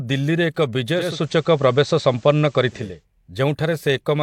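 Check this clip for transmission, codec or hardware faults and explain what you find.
There's one fault here: digital radio blending to analogue, from 0.90 s to 3.06 s. The receiver lost the digital stream and cross-faded over 363 ms to the station's FM feed, so the level shifts by about 3 dB, and faint hiss sits well under the speech until it blends back.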